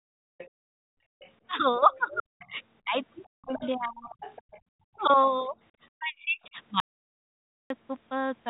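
From 0.0 to 0.1 s the speech is pushed down by roughly 40 dB, and the same speech suppressed in double talk returns from 1.78 to 4.18 s (about 1.5 s lost, dips near 35 dB) and from 4.83 to 6.57 s (deep cuts near 40 dB). The likely cause is an echo canceller that, facing both parties at once, attenuates the near talker along with the echo.

Faint copies of the other side's voice leak through at 0.38 to 0.48 s (about 20 dB under the speech), 1.2 to 1.31 s (about 30 dB under), 1.94 to 2.19 s, and, most audibly, 3.54 to 4.98 s at about 15 dB under. This is likely loudspeaker echo the canceller failed to remove. It is a separate voice overlapping the talker, not a change in the talker's own level.

From 0.49 to 1.2 s the background is gated by the echo canceller, with the room tone falling by about 34 dB while the far end plays and then recovering.

From 6.80 to 7.70 s the audio drops out to silence for about 0.9 s, likely from a lost input. 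The gap is silent with no room tone, which sets it apart from the canceller's partial dips.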